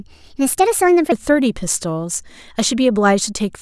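A section at the wrong speed runs from 0 to 1.12 s. The speech plays 1.34 times too fast, likely because that stretch was fitted to the wrong clock. Pitch rises with tempo by about five semitones, so the speech sounds hurried and high until normal speed returns.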